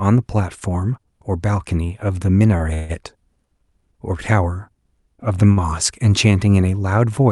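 At 2.57 s, a short stall from a late packet holds the sound for about 24 ms. The jitter buffer ran dry, so the last sound stretches briefly. At 2.74 s, the call audio freezes until 2.91 s. The sound turns into a fading buzz for about 150 ms, likely from packets delayed in transit, then resumes where it stopped. At 5.52 s, another short stall stretches the sound by about 40 ms. Nothing is lost in any of these. The timing just drags.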